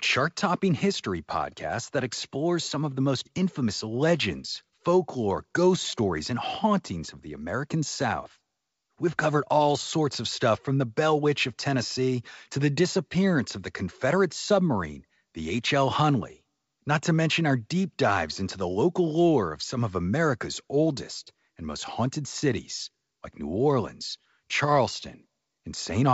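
No faults are audible in the speech; the G.722 wideband telephone coding at 64 kbit/s leaves its marks faint at most, with the band extending to about 7 kHz.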